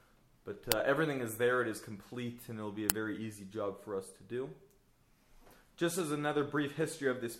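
There's a loud crack at 0.72 s and another at 2.90 s. Each is an uninitialised buffer: a block went out to playback before any audio had been written into it, so whatever junk was sitting in that memory got played as if it were samples. Both bursts last only about 1.45 ms, which fits a 64-sample buffer. At that length the garbage doesn't register as noise with any texture. You just hear a sharp click.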